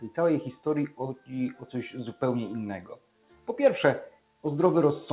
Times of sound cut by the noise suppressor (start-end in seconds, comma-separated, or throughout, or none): 0.89-1.69, 2.82-3.48, 4.10-4.44